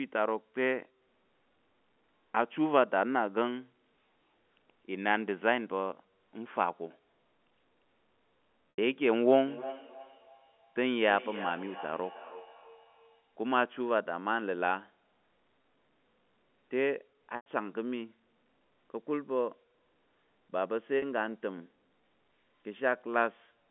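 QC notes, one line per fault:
8.70, 15.62, 17.36 and 20.98 s: packet loss with pitch repetition. Gaps of 80, 20, 100 and 40 ms are bridged by a repeated pitch period, heard as a brief buzzy hold, the longer gaps fading into silence before the speech returns.
9.47 to 13.31 s: feedback echo between two devices. Sound returns roughly every third of a second, thinner and ringing, at up to about 13 dB below the speech.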